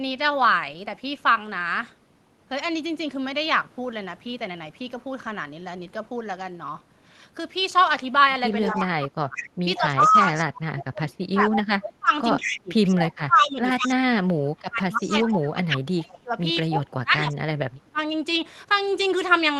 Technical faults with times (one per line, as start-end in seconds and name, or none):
8.62-8.82 echo leak
8.66-9.38 speech suppressed in double talk
9.36-9.78 echo leak
9.78-16.33 speech suppressed in double talk
12.37-12.60 echo leak
13.87-13.93 echo leak
15.03-15.24 echo leak
16.68-17.99 speech suppressed in double talk